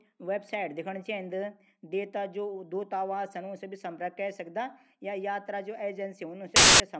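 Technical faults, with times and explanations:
6.56 to 6.80 s, file tags played as audio: near the end of the speech, a burst of very loud white noise cuts in and stops just as abruptly, lasting about a quarter of a second. The player has read an embedded cover picture as if it were sound. Picture data is compressed, so its bytes are close to random. Treated as samples, random values swing across the whole range, giving loud, flat static with hard edges.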